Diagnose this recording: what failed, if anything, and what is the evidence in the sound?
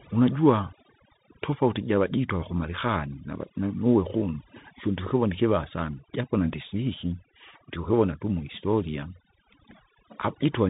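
The background drops and breaks up into twinkling specks. This is overdone noise removal at the call-processing stage: the suppressor pushes bands near its noise estimate far down, taking weak speech components with them.

The speech is narrowband, with nothing above 3.8 kHz, sibilants come out scratchy, and a granular hiss sits under the voice for the whole clip. This is the codec stage, the Bluetooth CVSD headset codec, consistent with a 64 kbps stream, where one-bit slope tracking cannot keep up with fast high-frequency energy.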